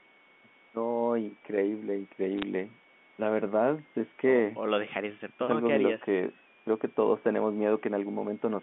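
From 2.38 to 2.43 s, bit errors on a digital phone line produce a brief burst of crackle: a few sharp ticks riding on the speech. On this G.711 A-law line, each flipped bit corrupts a single 8-bit sample, and the error rate is low, on the order of one bit in several hundred. On the waveform these show as isolated single-sample spikes. On the spectrogram they appear as thin vertical streaks spanning the full band up to 4 kHz.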